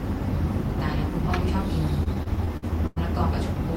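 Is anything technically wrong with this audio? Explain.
Yes. From 2.03 to 2.98 s the speech has repeated stalls (stutter): packets arrived late, the jitter buffer ran dry seven times, and the receiver stretched the last sound, up to 100 ms per gap and about 249 ms in all. Unlike packet-loss dropouts, nothing is missing; the speech drags and hiccups.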